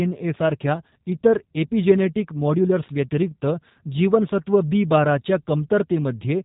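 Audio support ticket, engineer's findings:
Speech rough and slightly synthetic throughout, top end gone above 4 kHz. Cause: G.729 codec, consistent with the 8 kbit/s G.729A variant; voice rebuilt from vocal-tract filter, pitch predictor and sparse pulses per 10 ms frame, plainly audible damage.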